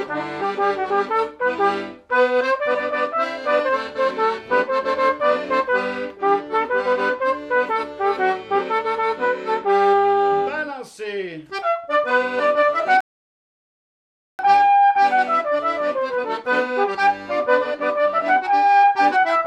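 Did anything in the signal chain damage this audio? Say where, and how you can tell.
Yes. A rebuffering stall at the playback stage: at 13.01 s the sound drops to silence for 1.38 s and resumes at 14.39 s. The player ran out of downloaded audio and waited. Unlike a packet-loss dropout, nothing is skipped; the gap only adds time.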